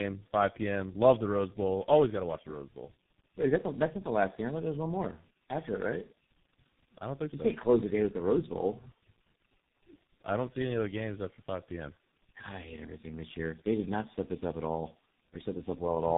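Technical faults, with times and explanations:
Throughout: tandem speech coding. Speech sounds rough, muffled and warbly, with nothing above 3.8 kHz, which fits three codecs in series ending at G.723.1, each recoding the previous one's errors.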